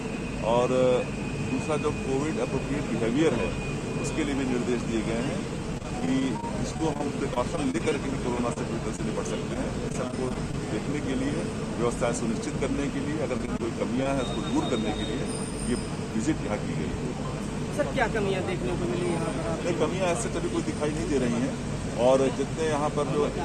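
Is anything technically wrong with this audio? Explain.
Yes, there's repeated packet loss (robotic sound) at 5.75 to 7.93 s, 8.53 to 10.55 s and 13.37 to 14.07 s. Packets kept going missing, and each short hole, none longer than about 29 ms, got patched by stretching the previous sound, so it turns choppy.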